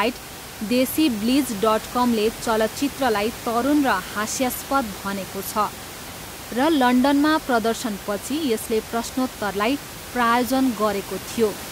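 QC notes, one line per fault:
No faults are heard anywhere in the clip. Room noise sits in the background at about 14 dB below the speech, as part of the recording itself.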